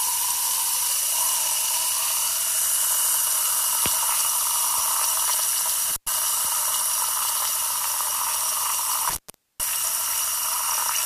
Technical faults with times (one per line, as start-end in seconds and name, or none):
5.90-6.07 intermittent contact
9.10-9.60 intermittent contact